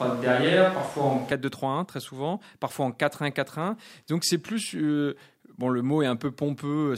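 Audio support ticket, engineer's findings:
Hollow, roomy, bass-light sound from clip start to 1.32 s, level about the same, noise about 25 dB under speech, abrupt return. Likely switch to a distant microphone, close pickup missing.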